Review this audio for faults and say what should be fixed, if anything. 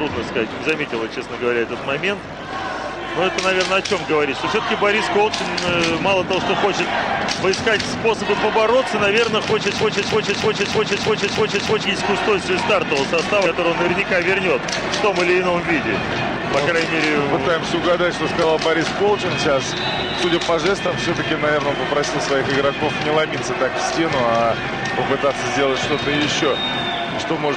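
From 9.78 to 11.85 s the audio turns into a broken-record loop: a 314 ms fragment plays seven times back to back, and whatever should have followed is lost. This is likely a stalled player or stream re-sending the last buffer it held. Unlike a frame skip, time does not jump forward; the same piece repeats identically. Prevention: make the player or stream output silence on underrun instead of reusing the last buffer.

At 13.45 s and 20.23 s compressed frames are skipped. The audio jumps ahead by about five frames (roughly 100 ms) and then about two frames (roughly 50 ms), multiples of a 23.2 ms frame. At each join the audio simply jumps ahead, and nothing repeats. Prevention: check file integrity and use error-concealing decoding so damaged frames are replaced, not dropped.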